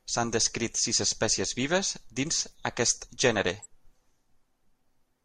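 Three brief chirps of misplaced noise cut into this speech clip: a loud one at 1.02 to 1.07 s after "descrit sis", a much fainter blip at 2.52 to 2.55 s after "vives dins", and a moderate one at 3.58 to 3.65 s after "vives dins aquest gènere". Each is a corrupt frame decoded. Flipped bits in the compressed stream were played anyway, so misread gains and codes spray energy into wrong frequencies for what sounds like two or three frames each time.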